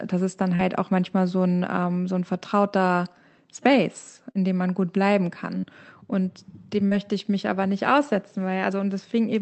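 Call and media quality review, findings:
Short concealed packet loss at 0.55, 4.31, 5.59 and 6.87 s: each about 40 ms gap in the call stream filled by decoder concealment, heard as a brief smear or wobble.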